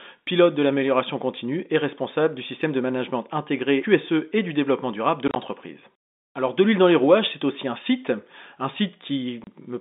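Right after "du développement durable de", at 5.28 to 5.36 s, the speech is chopped by brief silent holes with hard edges, totalling about 50 ms. A shorter 30 ms gap follows at 9.44 to 9.47 s. Both come from packet loss filled with silence, with gap sizes that fit 10 ms packets, heard through a narrow telephone band.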